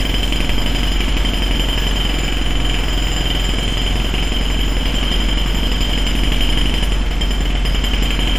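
No audible technical faults anywhere in the recording of sounds.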